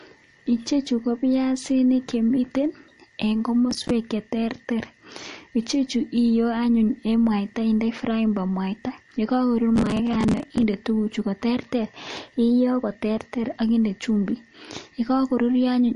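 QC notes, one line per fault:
Throughout: MP3 compression, likely at a low bitrate around 40 kbps. Nothing survives above 10.6 kHz, and weak frequency lines flicker on and off between frames, giving plainly audible watery swirl and smeared attacks. Unlike crackle, it never stops and leaves no hard-edged gaps.
3.71–3.90 s and 9.76–10.64 s: processor overload crackle. Roughly 10 ms buffers repeatedly missed their deadlines and replayed stale audio with hard edges, giving a gritty tearing burst, about ten misses in the first and forty in the second. It stops when the load passes, unlike steady codec swirl.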